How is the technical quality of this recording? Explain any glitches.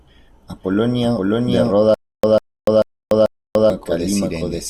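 The technical quality is poor, with two clear faults.

A doubled audio track runs through the whole clip. A full-band copy of the speech trails about half a second behind, at roughly the same level. It has no decay or room colour. A second, slower capture path is the likely cause.

A stutter with silent gaps runs from 1.94 s to 3.70 s. A 148 ms burst repeats four times, every 439 ms. Each burst is followed by 291 ms of digital silence. This is likely a stalled stream replaying its last fragment. The audio due in that span is lost.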